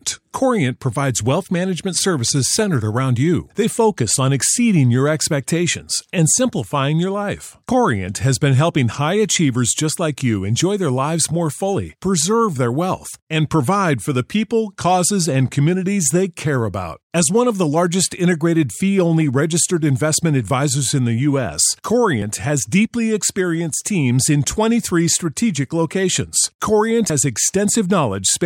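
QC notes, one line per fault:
7.69 s and 22.22 s, dropped buffers (overrun): audio was likely not read out before the hardware overwrote it, losing around 50 ms after "and simplifying your life" and a shorter slice before "has deeply experienced teams". The gaps close up without silence, so each is heard as a skip forward.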